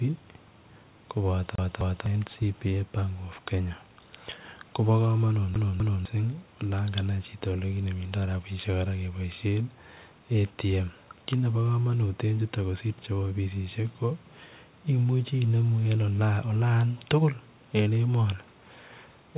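A disc skip, the CD stuck on one turn, sends the laser back a track at the same point each rotation, so this speech clip twice stutters through a roughly 0.25 s loop, repeated two times with brief mutes at each jump, from 1.55 to 2.06 s and from 5.55 to 6.05 s, heard through telephone-band audio with nothing above 4 kHz.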